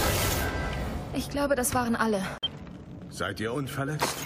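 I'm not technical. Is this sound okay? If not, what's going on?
No. At 2.38 s the sound drops out suddenly and comes back at 2.47 s, leaving a short silent hole. This is a corrupt frame muted: a few damaged chunks of compressed audio couldn't be decoded, so the player filled them with silence while keeping everything in time.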